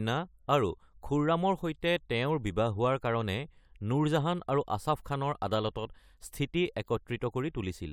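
No technical faults are audible anywhere in the recording.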